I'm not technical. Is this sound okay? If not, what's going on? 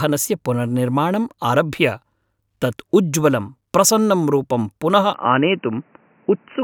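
No. From 5.14 s to the end, the speech suddenly turns dull and boxy, with nothing above 3 kHz. The likely cause is the input switched to a poorer device.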